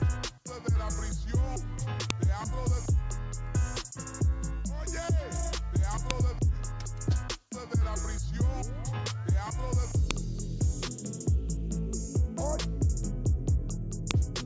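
Sharp, loud clicks land at 2.10, 6.11, 10.11 and 14.11 seconds, one every 4 seconds. This is a file header played as audio. Each joined piece kept its WAV header, so those bytes play as samples. Each gives a brief snap, unrelated to the sound around it.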